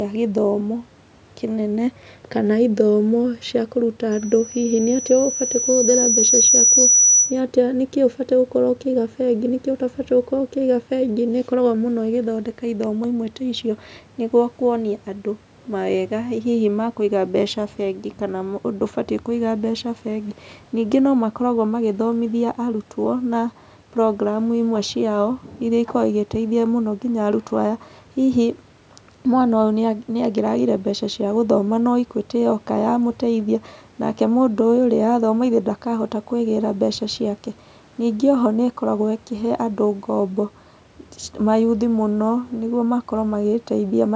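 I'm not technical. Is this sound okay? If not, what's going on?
No. From 4.11 to 7.41 s there is a loudspeaker feedback squeal. A microphone picks up its own loudspeaker, so a high 5.9 kHz whistle swells over about two seconds.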